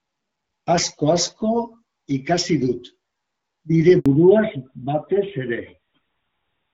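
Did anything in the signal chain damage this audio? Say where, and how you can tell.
Yes. At the network stage there is a handover gap from 4.00 to 4.06 s: the sound fades out quickly and stays silent for 60 ms while the call switches links. Unlike a dropout from ordinary packet loss, nothing is concealed or repeated, and the audio that resumes has a different bandwidth.

At the codec stage, a fallback to narrowband starts at 4.06 s and lasts to the end. Nothing above 4 kHz remains, and the sound turns duller and rougher. Before the gap, the light HD Voice coding (fitting AMR-WB at about 12.65 kbit/s) reaches well past 4 kHz. The sudden loss at the handover points to a codec switch, likely to AMR-NB at 12.2 kbit/s, rather than a fixed low-pass filter.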